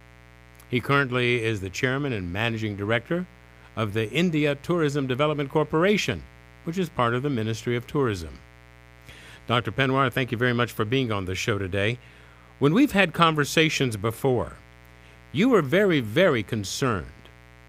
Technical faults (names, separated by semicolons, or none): mains buzz